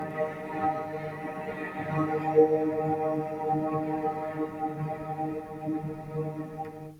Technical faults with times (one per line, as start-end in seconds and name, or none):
0.00-6.99 noise suppressor applied to music or sounds